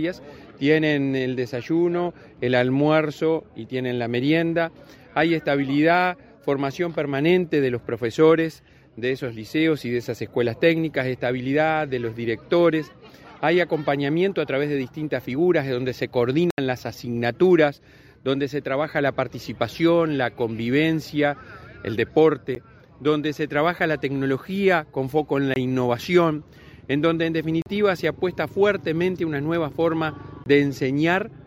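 Five blocks of digital silence, likely from an output buffer that went unfilled, fall at 16.51–16.58 s (75 ms), 22.55 s, 25.54–25.56 s, 27.62–27.66 s and 30.44–30.46 s, the shortest, at 22.55 s, coming across as a tick rather than a gap.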